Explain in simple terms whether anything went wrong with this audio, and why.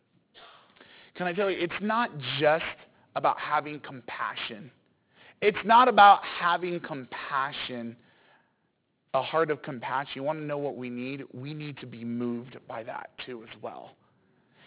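Aliasing runs through the whole clip. The audio was converted to a lower sample rate without first removing the high frequencies it could no longer hold, which fits a drop to about 8 kHz. Everything above 4 kHz folded back down into the range below 4 kHz as false, unrelated tones. You hear it as gritty, metallic hiss and sizzle on the s and sh sounds, and the highs crowd right up to a hard ceiling at 4 kHz.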